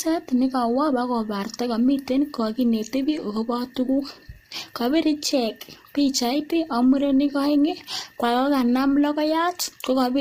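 Low-delay AAC compression runs through the whole clip. The speech sounds rough and grainy, with noise filling the gaps between the voice's harmonics and nothing above 15.6 kHz. This is likely the work of AAC-ELD, the low-delay codec used in video calls. Its short frames resolve pitch harmonics poorly and use up bits quickly. The heavy damage heard here fits a low bitrate of around 24 kbps.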